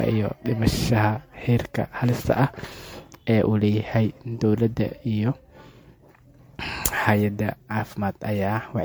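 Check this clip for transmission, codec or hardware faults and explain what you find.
One codec fault runs through the whole speech clip: generation loss, likely from repeated MP3 re-encoding, about seven passes at around 96 kbit/s, each requantising on shifted frames, leaving swirly, hollow, smeared sound with blurred attacks.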